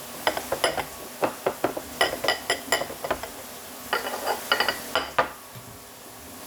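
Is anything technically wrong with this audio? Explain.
No, nothing technically wrong can be heard in this recording.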